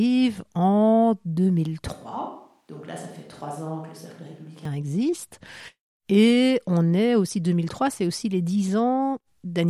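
A switch to a distant microphone runs from 1.92 to 4.65 s in this speech recording: the sound abruptly turns roomy and thin, about 10 dB quieter, with room noise more audible, likely because the close microphone dropped out.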